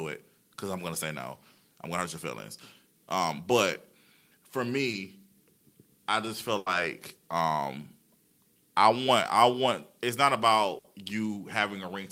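A speech recording carries one short concealed packet loss and two bursts of packet loss. At 4.91 to 4.95 s about 20 ms of audio failed to reach the decoder in time, so the receiver extended the preceding sound to cover the hole before crossfading back, leaving a brief smear or wobble in the speech. Larger bursts of packet loss occur at 6.58 to 6.68 s and at 10.78 to 10.86 s, where the receiver had to synthesise 80 ms and then 60 ms, and the same amount of real speech is gone in each case. Each fill prolongs the last sound while fading it, heard as a sustained buzz if that sound was voiced or a dying hiss if not, and the speech then picks up later with the section between skipped.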